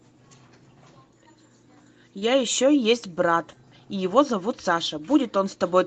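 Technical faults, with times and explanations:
2.19–2.23 s, short concealed packet loss: a small stretch of the call, about 20 ms of audio, failed to reach the decoder in time, so the receiver invented a stand-in by extending the sound that came just before it and then crossfading back into the real signal. That patch is heard as a brief smear or wobble in the speech. The Opus call path behind it keeps the audio band-limited to about 8 kHz.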